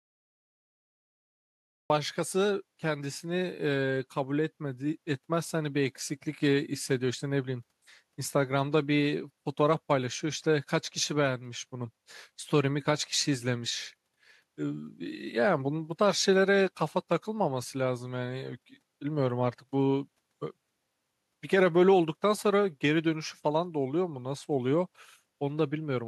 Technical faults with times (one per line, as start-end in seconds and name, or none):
0.00-1.90 cut-off start